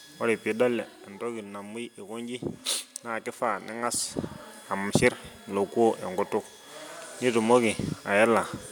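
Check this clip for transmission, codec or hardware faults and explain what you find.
I find no transmission, codec or hardware faults in this clip.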